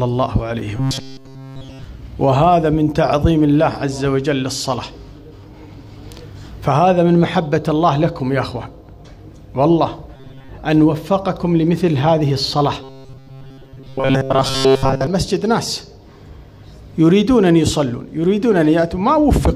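Robotic sound from repeated short buffers appears from 0.77 to 1.84 s, 10.16 to 10.49 s and 12.81 to 15.07 s, where the sound turns into a rigid metallic buzz at 134 Hz. The likely cause is audio arriving too seldom, so playback keeps looping a fragment of about 7.5 ms in place of skipped material. The first stretch is looped throughout, and the later two mostly.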